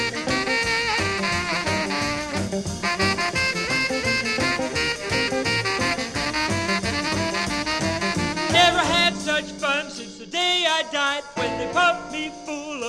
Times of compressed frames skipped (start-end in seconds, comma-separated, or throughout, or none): 7.06, 11.36